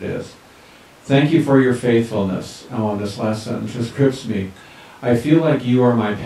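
No technical faults are audible anywhere in this speech recording.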